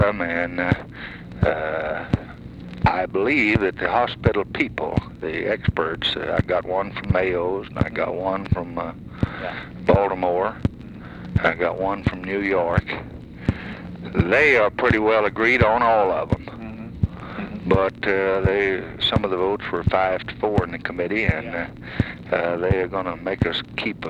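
No technical faults can be heard anywhere in this audio.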